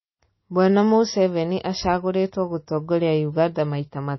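An encoder starved of bits, likely MP3 compression at a low rate, fitting something near 24 kbps, shapes the speech for its whole length. With too few bits, the encoder throws away everything above a fixed cutoff, so nothing survives above about 5.8 kHz and the speech sounds dull and boxed-in. It also drops weaker frequency lines that flicker in and out between frames, leaving a plainly audible watery, swirling texture, metallic chirps on s sounds, and smeared consonant attacks.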